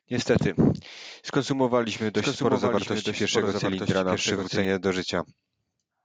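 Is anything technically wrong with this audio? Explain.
Yes. From 1.89 to 4.65 s there is a doubled audio track: a dry copy about 5 dB quieter trails roughly a second behind, starting and stopping abruptly, likely from a second, slower capture path.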